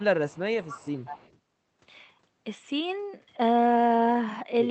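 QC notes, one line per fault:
0.00–0.04 s, 0.27–0.41 s and 0.63–1.38 s, echo leak: a delayed copy of the speech trails the talker by 187 ms, faint at first (about 30 dB down in the two short scraps) and then much stronger, about 15 dB below the speech, across the longer stretch. This is likely a far-end loudspeaker feeding its microphone with an echo canceller that failed to remove all of it, so the leftover was sent back down the call.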